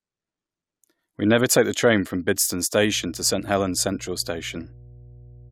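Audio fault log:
2.79 to 5.52 s, mains hum: power-line coupling adds a steady 60 Hz tone, roughly 25 dB under the speech, fixed in pitch, unlike shifting broadband rumble.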